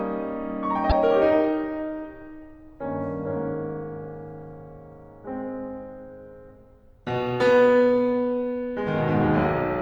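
From 0.90 to 0.92 s the music breaks into a brief blip caused by damaged data in the compressed stream: the decoder misreads corrupted frames and loses sync.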